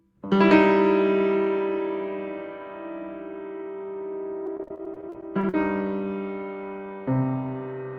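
From 4.46 to 5.54 s, repeated packet loss left 14 short gaps, the longest 44 ms, each patched by stretching the previous sound, making roughly a quarter of it choppy and robotic.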